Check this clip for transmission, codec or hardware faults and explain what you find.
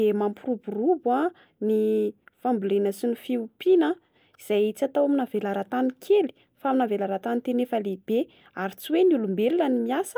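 Nothing in the speech points to a fault. There is no moment in the recording that calls for an explanation.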